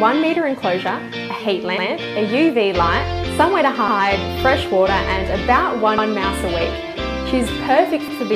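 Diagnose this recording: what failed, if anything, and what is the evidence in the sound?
The chunk handling in the buffer stage failed, giving overlapping chunks: a 100 ms stretch of sound plays twice at 1.78, 3.88, 5.98 and 8.08 s, heard as a stutter. Each 2-second chunk starts before the previous one finished, so the seams double up.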